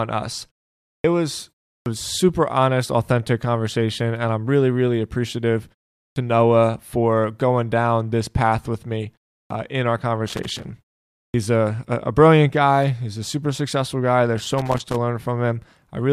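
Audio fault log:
1.00, 1.82, 6.12, 9.46 and 11.30 s: clipped start after a pause. Sound bursts abruptly out of 0.37 to 0.57 s pauses with its first 40 to 44 ms missing, because the output device needs time to wake again.
10.27–10.65 s and 14.38–14.96 s: loose connector crackle. Irregular scratchy crackle, the first just after "in our", as a worn contact rapidly makes and breaks, chopping the signal.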